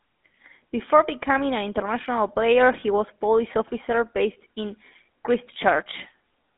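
Throughout the speech, the GSM full-rate codec is plainly audible: a buzzy, gravelly roughness from coarse pulse-driven excitation, fitting a 13 kbps GSM coder. On a spectrogram the energy sits in a band from 200 Hz to 3.6 kHz, with blank space above and regular horizontal striping.

From 2.80 to 2.84 s, lost GSM frames cause a brief metallic ring, fitting a single missing frame. The decoder repeats the last good frame's parameters. A spectrogram shows a short smeared, frozen patch.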